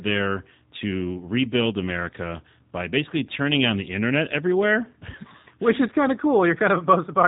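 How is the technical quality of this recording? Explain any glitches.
The quality is limited by plainly audible G.729 codec damage throughout the speech. From start to finish the audio sounds slightly rough and synthetic, with a dull, boxed-in top since nothing above 3.8 kHz survives. The coder rebuilds each 10 ms frame from a vocal-tract filter, a pitch predictor and a few pulses, which fits a low-rate VoIP link of about 8 kbit/s. That sparse rebuild causes the grainy, artificial edge.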